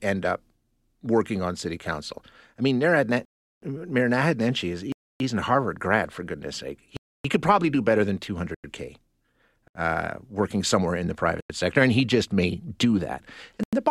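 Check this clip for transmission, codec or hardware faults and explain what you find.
Seven blocks of digital silence break up the speech: likely because the output buffer went unfilled, the audio drops abruptly to silence and back.

They fall at 3.25 to 3.62 s (about 370 ms), 4.92 to 5.20 s (about 280 ms), 6.97 to 7.25 s (about 280 ms, between "grad for goodness sake" and "could probably do better"), 8.55 s (93 ms), 9.68 s (74 ms), 11.41 s (93 ms, between "working somewhere in the" and "sector and he just") and 13.63 s (93 ms, between "just may do that" and "the bottom"). The longer holes sound like dropouts, and the shorter ones sound like brief holes. Most of the lengths fit whole buffers of 4096 samples.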